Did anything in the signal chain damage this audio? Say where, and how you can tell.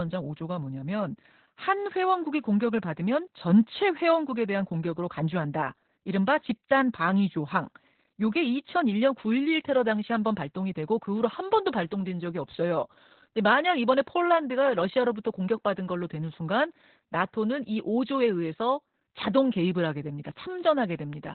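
Yes, the codec stage did, throughout the speech. This is heavy Opus voice compression: nothing is present above about 4.3 kHz, and the speech sounds muffled, hoarse and robotic. That points to a very low bitrate, around 8 kbps, where Opus drops to narrowband and codes the speech with its SILK linear-prediction coder alone. The encoder keeps only the rough spectral envelope and quantises the excitation coarsely, which produces the roughness.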